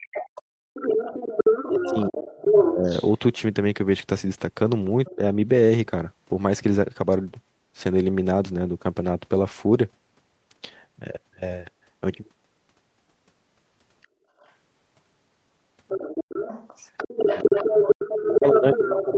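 From 0.00 to 3.12 s the other side's voice leaks through at roughly the talker's own level, likely loudspeaker echo the canceller left in the microphone signal. Overlapping it, from 0.27 to 2.86 s, the talker's speech is suppressed in double talk, likely because the canceller turned down both voices together. The talker dips in pieces, by up to about 40 dB and for roughly 1.5 s in total.

From 5.05 to 5.10 s a short scrap of far-end voice leaks through about 25 dB below the speech, likely residual echo. From 5.10 to 5.21 s the speech drops by up to about 25 dB, likely the same double-talk suppression.

From 14.02 to 14.53 s a faint echo sits about 35 dB down, likely from the loudspeaker. From 14.09 to 14.22 s the background is gated by the echo canceller: the room sound falls away by about 19 dB for roughly 150 ms, then returns.

From 15.88 s to the end the other side's voice leaks through again at about equal level, likely uncancelled echo. 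From 17.33 s onward the talker is suppressed by up to about 15 dB, likely double-talk attenuation.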